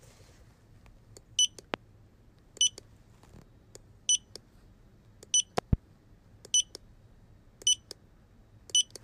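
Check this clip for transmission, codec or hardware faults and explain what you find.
Two loud pops stand out. The first lands at 1.74 to 1.76 s as a single sharp crack, roughly 20 dB above the surrounding sound. The second, at 5.58 to 5.75 s, is a double pop, somewhat quieter at around 15 dB above it. Both are likely caused by a sudden voltage step or spike, from a connector, switch, static discharge or driver glitch. Downstream circuitry shapes each spike into a thump. The audio carries on underneath.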